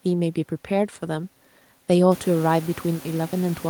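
Nothing in the system has gone wrong here; the one change you'll hear is the room's own background noise climbing by about 20 dB at roughly the two-second mark, which is just the space around the microphone, and it still sits about 22 dB under the speech.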